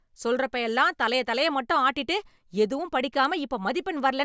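From 2.5 s to the end, just after "தலைய தலைய மட்டும் ஆட்டிட்டு", the speech carries a resampler restarted on every block. Each 250 ms block was converted separately, apparently from 48 kHz down to 16 kHz, so every block edge gets a small error and a faint tick recurs at 4 Hz while signal is present. Unlike buffer-underrun clicks, the ticks are perfectly regular and no audio goes missing around them.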